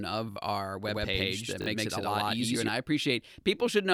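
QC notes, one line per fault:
0.32 s and 1.62 s, repeated buffer: At each point, a 20 ms piece of audio plays twice more, to 0.36 s and 1.66 s. This fits a 20 ms buffer replayed when new audio arrived late. Hard joins make a short stutter, and about 40 ms of audio is lost.
0.88 to 2.68 s, doubled audio track: A second full-band copy of the speech runs about 100 ms behind, at about the same level. It has no decay or room colour and starts and stops abruptly. This is likely from a second, slower capture path or from two copies held out of step in an edit.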